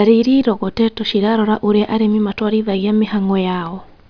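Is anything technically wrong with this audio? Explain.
No, nothing technically wrong turns up anywhere in this speech recording, so there's no fault to point to.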